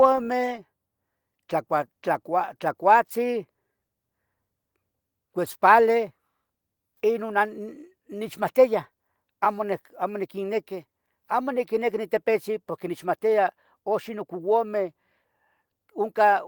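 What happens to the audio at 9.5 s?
Nothing goes wrong at 9.5 s; the speech there is intact, carried through Opus voice compression at 24 kbps in its hybrid mode, with only the light coding texture that rate leaves.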